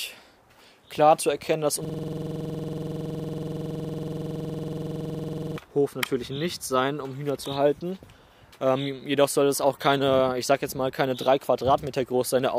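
At 1.85 s the audio locks into a system hang loop that runs until 5.58 s. The machine or its driver stalled while the sound hardware kept replaying the same ring buffer, so one 46 ms slice repeats about eighty times. That loop length fits a 2048-sample buffer. At 21.5 Hz the repetition sits right between a tone and a stutter, giving a coarse, rattling buzz until the sound picks up again.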